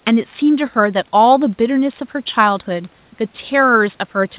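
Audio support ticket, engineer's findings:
No faults found in the speech audio.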